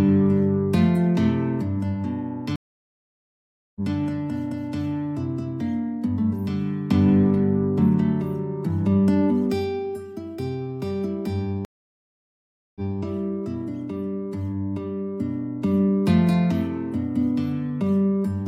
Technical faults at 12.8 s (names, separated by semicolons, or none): stream reconnect